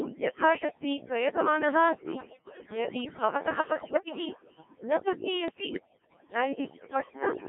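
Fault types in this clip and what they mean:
Overdone noise removal: A noise reducer was pushed too hard, cutting frequency bands whenever they came close to its idea of the noise floor. Here the background has dropped and broken up into little twinkling specks, and the quieter parts of the speech went down with the noise. It runs through the whole clip, underneath the codec's own coloration.
Codec 2 vocoder: This is the low-rate digital-radio vocoder that sends only pitch, voicing, energy and a rough spectral shape, then rebuilds the speech from sine waves instead of keeping the real waveform. The heavy, buzzy, robotic quality throughout points to one of its lowest modes, around 1.3 kbit/s, and the sound sits inside a line band of roughly 150 Hz to 3.5 kHz, with nothing below or above.
Bit errors on digital voice radio: At the edge of coverage, corrupted bits reached the vocoder. At such a low rate every bit helps set a whole frame's pitch, level, voicing or spectrum, so a bad one throws that frame off. 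Listen at 2.16 to 2.66 s, 3.80 to 4.25 s and 5.48 to 6.32 s: the synthetic speech jumps in pitch and level and breaks into warbles, bleeps and gibberish, consistent with around one bit in ten going wrong.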